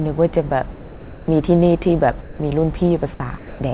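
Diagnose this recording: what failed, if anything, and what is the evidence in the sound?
Sound dropped by the voice detector, at 0.71 to 1.28 s, 2.21 to 2.39 s, 3.14 to 3.20 s and 3.38 to 3.59 s, is a call-processing fault. In each gap the speech gives way to steady comfort noise, swallowing about 200, 110, 30 and 100 ms of actual speech, before the voice returns. The likely mechanism is the sender's voice detector mistaking quiet speech for background and halting transmission, so the receiver fills in synthetic noise over a path band-limited to 4 kHz.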